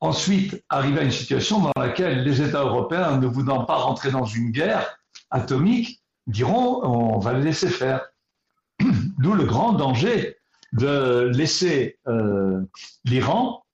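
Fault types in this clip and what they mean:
Gap at a join of encoded pieces: separately encoded chunks butted together untrimmed, so a 41 ms silence drops in around 1.72 s before the sound carries on.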